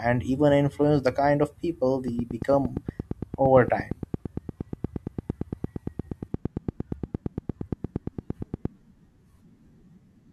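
Speech, with a train of clicks from 2.08 to 8.66 s, starting just after "the kind of people". About fifty similar clicks arrive at a regular 8.7 per second, peaking roughly 10 dB above the speech and ticking through pauses too, likely from electrical interference or a faulty connection or power supply.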